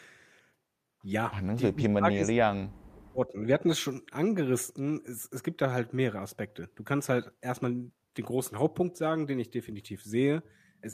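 Speech suppressed in double talk from 1.76 to 3.36 s in this speech recording: the talker's level collapses, at worst by something like 40 dB, and breaks up for roughly a second and a half, likely because an echo canceller could not separate the talker from overlapping far-end echo and attenuated both.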